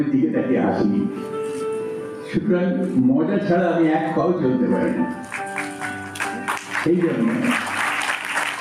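Throughout the clip there is gain pumping, a swing of around 10 dB. The likely cause is input gain set far too high, with a fast limiter or compressor clamping down on each peak and releasing in the pauses. Unlike a noise gate, a limiter does not cut the sound out completely. The loud passages sound squashed.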